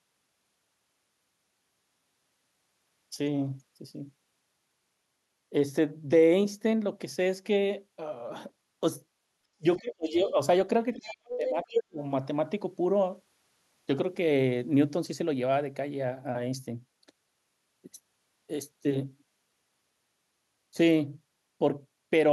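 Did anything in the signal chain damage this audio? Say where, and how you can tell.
Yes. Speech suppressed in double talk occurs at 9.57–10.38 s and 10.96–11.99 s, with drops of roughly 30 and 40 dB, likely from the call-processing echo canceller ducking both talkers during overlap.

The other side's voice is leaking through at 10.94–11.16 s, about 20 dB below the speech, and again at 11.43–11.83 s near equal level. This is likely residual loudspeaker echo the canceller failed to remove.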